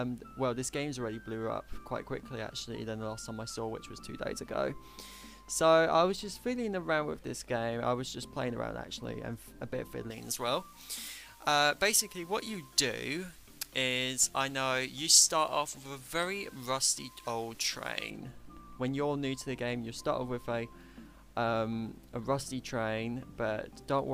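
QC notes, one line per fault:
10.1–18.1 s, pre-emphasis left on: the top end jumps up by about 11 dB at 10 kHz relative to 1 kHz, so it turns thin, bright and hissy. The treble boost went in but the matching de-emphasis was never applied, which fits a J.17-style curve.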